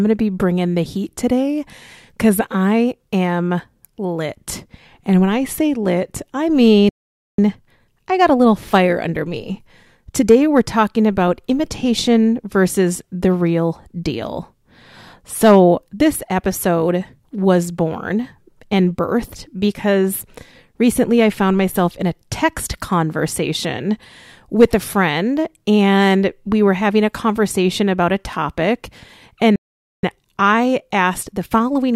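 At 6.89 s the player most likely ran dry of buffered data or had its output thread held up, giving a playback stall: the speech cuts off mid-flow and the output is silent for about 0.49 s until 7.39 s. The same thing happens again at 29.56 s, with about 0.47 s of silence before the sound returns at 30.03 s. Each gap is a dead pause in the middle of the speech rather than a natural break.

After each stall the player works off its backlog through time-compressed catch-up, removing small slices of audio and cross-fading the joins so the stream runs faster without any change in pitch. From 7.39 s to 10.39 s the speech plays at 1.1 times normal speed. From 30.03 s to the end of the clip it runs at 1.15 times. In both stretches the delivery sounds hurried but keeps its normal pitch.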